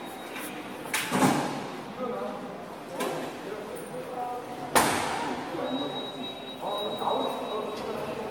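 Throughout, the audio has most likely been passed through a lossy encoder around five times over, giving generation loss. The character fits repeated AAC-LC coding near 96 kbit/s. Each pass requantised on a shifted frame grid, so the sound turns swirly, smeared and hollow, attacks blur, and nothing remains above 17 kHz.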